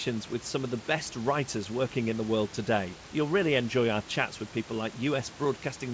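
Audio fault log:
No fault to log.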